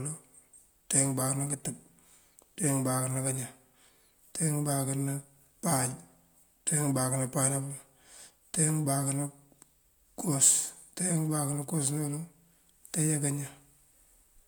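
No technical faults can be heard anywhere in this recording.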